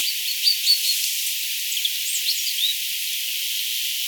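At 1.71 s, compressed frames are skipped. About one frame of the encoded stream never plays. It was either missing from the file or rejected by the decoder as damaged. The playback jumps ahead by roughly 30 ms, which fits a frame length of 26.1 ms. The neighbouring frames overlap, so the two sides blend at the join. The result is a brief smeared blip, not a sharp click. The sound lurches forward slightly at that point.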